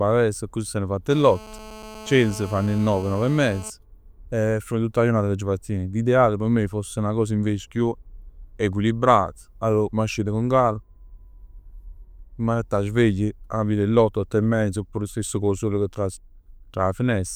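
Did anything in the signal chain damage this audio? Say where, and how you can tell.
Yes: analogue wiring rectified a nearby handset's 217 Hz call bursts, causing GSM phone buzz, a steady raspy tone about 18 dB below the speech, 1.10–3.70 s, after "accussì s'anna fatt".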